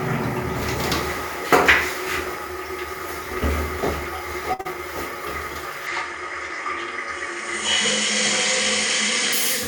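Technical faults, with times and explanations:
4.53–4.61 s, burst of packet loss: about 60 ms of audio failed to arrive in time. The receiver spent 55 ms stretching the last received sound and fading it down, giving a brief held, decaying tail. The sound then resumes slightly further on, with that stretch missing.
4.61–4.67 s, short concealed packet loss: straight after the burst, another 40 ms went missing. The receiver patched 39 ms of it by continuing the preceding sound and blending back into the real signal, which leaves a short smear where the audio rejoins.
5.87–9.33 s, input switched to a poorer device: the sound abruptly loses everything above 9.3 kHz and becomes duller, with no gap at the change and roughly the same level. A faint new noise floor appears far beneath it. This is likely caused by capture moving to a narrower-band microphone.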